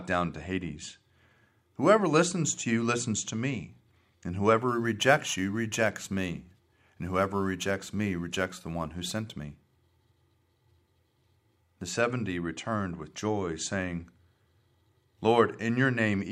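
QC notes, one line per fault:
4.68 to 9.56 s, crude rate conversion: a gritty, inharmonic fizz rides on the speech, strongest on loud and bright sounds, sitting roughly 25 dB below it. Samples were repeated rather than filtered, which points to a 44.1 kHz to 48 kHz change, leaving a patterned error with unrelated tones.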